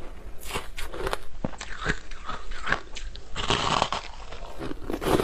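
At 1.11 s the receiver is digital radio blending to analogue: it loses the digital stream and cross-fades over about 314 ms to the station's FM feed, bringing hiss roughly 35 dB down and a level drop of about 1 dB, then blends back at 4.75 s.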